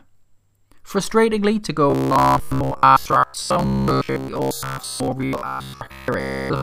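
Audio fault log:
1.90–6.62 s, robotic sound from repeated short buffers: from this point to the end the speech turns into a stiff, metallic buzz locked at 66.8 Hz, with the rise and fall of the speech still faintly traceable underneath. The likely cause is audio arriving too seldom, so playback keeps looping the most recent fragment to fill the gaps. A buzz at that pitch fits a repeated chunk of about 15 ms, and most of the real audio in this stretch is skipped.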